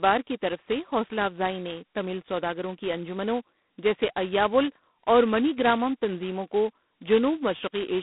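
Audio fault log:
Throughout: G.726 ADPCM, with heavy coding damage; a coarse, rasping hiss rises and falls with the speech level. That fits 2-bit adaptive difference coding at 16 kbit/s. The telephone band runs from 200 Hz to 3.6 kHz, with nothing above 3.9 kHz.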